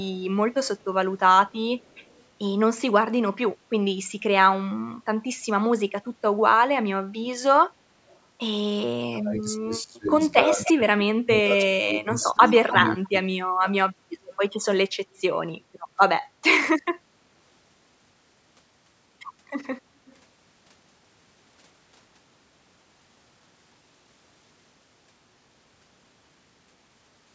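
Echo leak first shows up at 0.78–2.23 s and again at 8.07–8.19 s. A very faint copy of the talker trails about 300 ms behind, likely because a far-end speakerphone's echo canceller let some through.

From 9.11 to 13.71 s there's speech suppressed in double talk. With both sides talking, the canceller likely couldn't separate the talker from the echo, so it ducks the talker in patches, by up to about 30 dB.

Inside that stretch the echo leak gets much louder, only about 10 dB down at a 285 ms lag, at 10.65–10.72 s and 12.21–13.08 s. It then fades to faint echoes at 14.24–15.63 s and 20.06–20.16 s.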